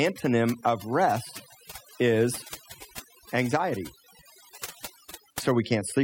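Across the whole speech clip, overdone noise removal breaks up the background. Aggressive denoising has gated quiet bands, leaving near-silent gaps with twinkling specks.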